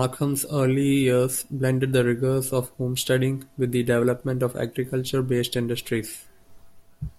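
No technical faults can be heard in this recording.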